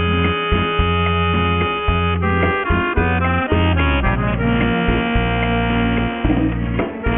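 Aliasing runs through the whole clip, from start to finish. The sound points to a drop from 48 kHz to about 6 kHz with no low-pass filter first, so everything above the 3 kHz fold point is mirrored back down to false, unrelated frequencies. Those folded components sit fairly loud, around 10 dB below the wanted signal, giving a gritty, metallic edge, and the spectrum stays dense right up to the 3 kHz band edge.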